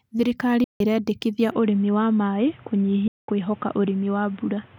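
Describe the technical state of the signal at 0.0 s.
The signal at 0.0 s is intact, with no audible fault at that moment.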